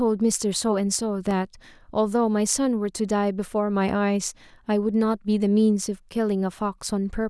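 At 1.31 s the output briefly drops to a block of digital silence: a run of samples lasting only about 0.58 ms is written as zeros instead of audio. Because the signal jumps straight to zero and straight back with no fade, each edge forms a sharp discontinuity. With a gap this short, the two edges merge into a single tick in the speech rather than an audible hole.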